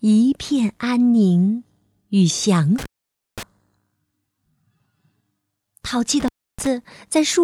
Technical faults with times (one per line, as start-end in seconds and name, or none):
2.78-3.43 intermittent contact
6.20-6.67 intermittent contact